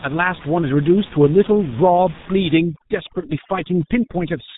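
From the first moment to the end, the speech carries the sound of the G.723.1 codec under heavy strain. Nothing reaches above 3.8 kHz, so the top is sharply cut off, and the hoarse, smeared quality fits a very low rate of around 6 kbit/s. Working in long 30 ms frames, the codec's voice model lags behind fast changes, blurring consonants into one another. This differs from simple low-pass filtering, which would muffle the sound but leave it clean rather than rough and buzzy.

At 2.58 s overdone noise removal sets in and lasts to the end. The room noise, which sat about 18 dB below the speech up to that point, is pushed far down, leaving small twinkling specks where single frequency bands flicker on and off. The weaker parts of the speech are dragged down along with the noise. Unlike a plain gate, which would cut whole stretches of sound, this leaves scattered tonal fragments.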